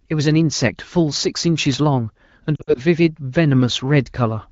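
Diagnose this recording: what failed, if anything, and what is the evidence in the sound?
The failure is lost AMR speech frames on the radio link, between 2.55 and 2.82 s. About 120 ms of speech is lost in short runs of up to 60 ms, which fits six 20 ms frames. The AMR-WB decoder stretches and fades the last good sound, so the gaps warble and soften instead of cutting to hard silence the way a buffer dropout would.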